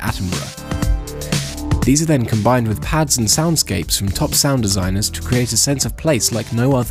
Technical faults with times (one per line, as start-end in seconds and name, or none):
none